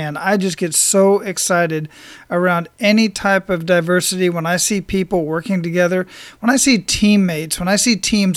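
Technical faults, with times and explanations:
Listening closely to the speech recording, nothing stood out as a technical fault at any point.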